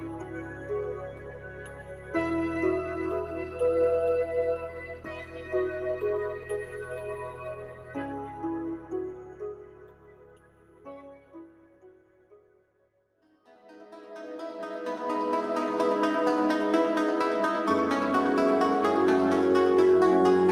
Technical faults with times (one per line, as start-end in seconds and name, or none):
0.00-20.52 noise suppressor applied to music or sounds
0.00-2.14 sound cut by the noise suppressor
4.64-5.52 sound cut by the noise suppressor
6.38-6.87 sound cut by the noise suppressor
7.19-7.96 sound cut by the noise suppressor
9.14-10.86 sound cut by the noise suppressor
11.18-13.46 sound cut by the noise suppressor